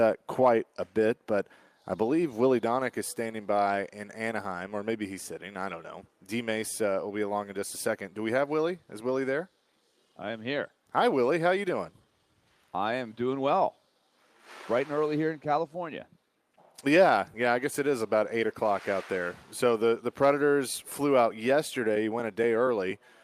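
No technical faults are audible.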